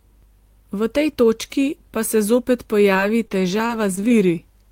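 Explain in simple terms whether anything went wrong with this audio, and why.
From 2.93 to 4.29 s the speech turns choppy and robotic, with tiny pieces dropping out. This is repeated packet loss (robotic sound): bits of audio kept going missing in transit, each short gap, none longer than 21 ms, patched by stretching the sound just before it.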